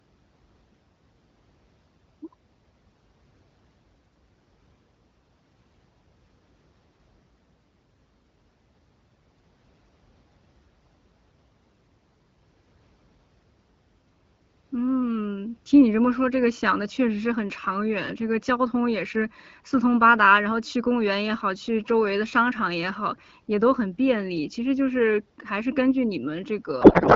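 A damaged spot on the source disc causes CD scratch ticks in this speech recording between 24.19 and 24.55 s. Once per turn of the disc, the blemish destroyed more data than the player's error correction could rebuild, so the player patched over the missing samples. The result is three short, regularly spaced ticks, each well under a millisecond, sitting on top of the speech. From 26.81 s to the end of the clip, a codec payload misread takes over. The AMR wideband frames were packed in octet-aligned form but decoded as if they were bandwidth-efficient, so every field the decoder read was shifted from where it belonged. The frames still looked valid, and the decoder turned the misplaced bits into garbled noise and warble that hardly follows the speech, in place of the voice that came before. The wideband coding itself, at 12.65 kbit/s, leaves the speech clear wherever these two faults are absent.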